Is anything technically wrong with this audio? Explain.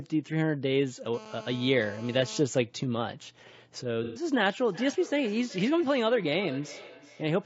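Yes, there are four faults.

Low-delay AAC compression is audible throughout. The speech sounds rough and grainy, with noise between the harmonics and a thin, synthetic-sounding top band. The likely cause is AAC-ELD, the low-delay codec used for video calls, at a low bitrate around 32 kbps. Its short frames can't resolve pitch harmonics well, so the damage clings to the voice itself. An added noise would sit apart from it.

A GSM phone buzz runs from 1.14 to 2.40 s. A nearby 2G phone in a call transmits in bursts about 217 times a second, and the audio circuitry rectifies those radio pulses. The result is a hard, raspy buzz at 217 Hz, rich in harmonics, at about 18 dB below the speech. It holds steady and ignores what is being said. Mains hum would sit at 50 or 60 Hz and sound smoother.

AAC frame loss with concealment occurs from 4.04 to 4.24 s. Roughly 120 ms of coded audio went missing, which fits about four lost frames. 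The decoder filled the gap by reusing the last good spectrum, so the speech smears into a noisy, phasey patch rather than dropping to silence. That smeared fill is what separates it from a plain dropout, which would leave a clean gap or a click.

Feedback echo between two devices starts at 4.6 s and continues to the end. A second device in the same room plays back what the first device's microphone sent, and that microphone picks it up again. Each device's echo canceller removes only its own playback, so this loop gets through. Speech returns at a fixed interval of about 0.4 s, with the loudest repeat about 17 dB below the speech. Each pass sounds thinner and more ringing. Room reverb would blur smoothly rather than repeating at set intervals.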